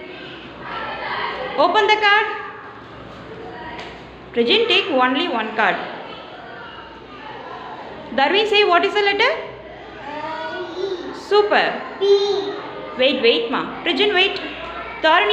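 Nothing goes wrong anywhere in this recording; it's just the sound, with no glitches or hiccups to point out.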